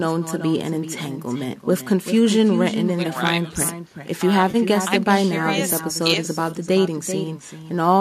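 From start to finish there's echo with no canceller: every phrase comes back around 400 ms later, about 9 dB down, and thinner. The far end is playing the call on a loudspeaker and its microphone sends that straight back, with nothing removing it.

At 4.51 to 4.56 s there's a short smeared, phasey patch lasting 30 ms. That's AAC frame loss with concealment: the decoder patched the gap from the last good spectrum, and 30 ms fits about three lost 10 ms frames, likely from low-delay AAC.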